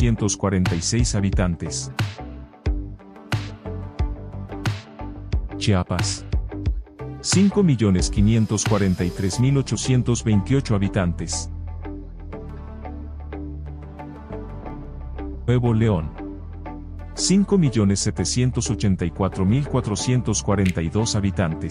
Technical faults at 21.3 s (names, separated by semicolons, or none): none